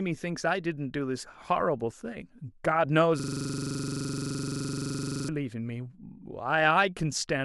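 From 3.20 to 5.29 s, a system hang loop: the driver froze while the hardware kept replaying one 42.67 ms buffer, which fits a 2048-sample buffer, repeating at 23.4 Hz. The exact, identical repeats, unlike a dropout's silence, give a rapid machine-gun stutter in the speech.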